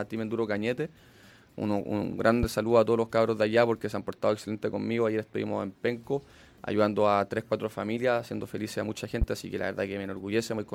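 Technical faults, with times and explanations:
2.43 s and 9.22 s: loud pop, each about 40 ms and some 10 dB above the sound; likely a voltage spike from a switch, plug or static discharge.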